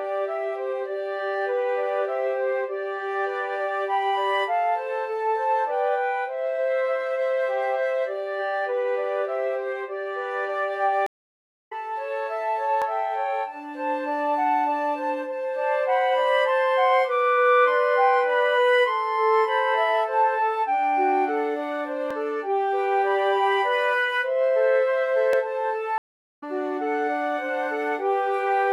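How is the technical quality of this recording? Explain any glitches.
Two kinds of glitches here, each happening more than once: a couple of stream dropouts and a few small skips.

The stream reconnects at 11.06–11.73 s and 25.98–26.44 s. The connection broke, the player went quiet, then restarted its decoder mid-stream. You hear about 0.64 s and 0.44 s of silence, and the audio comes back further along, roughly 0.7 s and 0.3 s ahead.

The skips at 12.82, 22.11 and 25.33 s are likely dropped buffers (overrun): samples weren't collected before the hardware overwrote them. Each one loses roughly 20 ms, and the two sides butt together, so there's a small jump with no gap.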